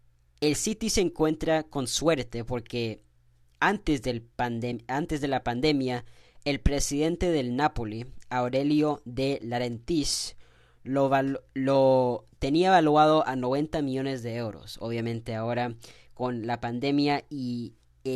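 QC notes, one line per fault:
4.72 s, AAC frame loss with muting: between "suerte porque antes del" and "antes de la pandemia", the sound briefly drops into a soft-edged gap about 10 ms long. That length fits one lost frame, which the decoder replaced with silence. The overlapping windows fade the sound out and back in. On a waveform it looks like a short tapered dip to near zero. On a spectrogram it is a thin vertical band that is empty at every frequency.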